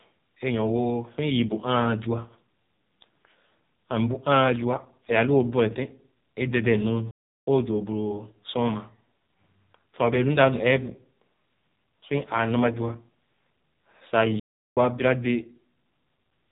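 The speech has passed through the AMR narrowband mobile codec at a very low bit rate. The codec rebuilds the voice from a crude vocal-tract model fed by only a few pulses per subframe, and the heavy damage fits an AMR-NB mode near 5.9 kbps. Nothing above 4 kHz survives, so the sound is dull and boxed-in, and the voice has a buzzy, synthetic edge from start to finish.

At 7.11 s there is a playback stall. The player most likely ran short of data or was blocked, so output simply stopped. The speech cuts off mid-flow into about 0.36 s of silence and resumes at 7.47 s. The same thing happens again at 14.40 s, with a gap of about 0.37 s before the sound returns at 14.77 s.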